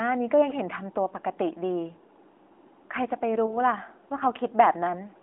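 Around 3.46 to 3.58 s there's a lost AMR speech frame: the AMR-NB decoder fills the gap with a brief warbly dip, which fits a single dropped 20 ms frame.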